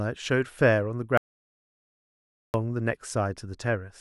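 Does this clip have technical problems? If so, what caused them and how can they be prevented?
Yes. An audio dropout to silence runs from 1.18 s to 2.54 s, about 1.37 s of the speech gone. The sound cuts off mid-flow and the gap is silent with no room tone beneath it, so the input feed itself stopped while the recorder kept writing samples. That points most likely to a lost connection, a failed link or an accidental mute upstream. Secure cables and wireless links, and monitor input levels live during recording.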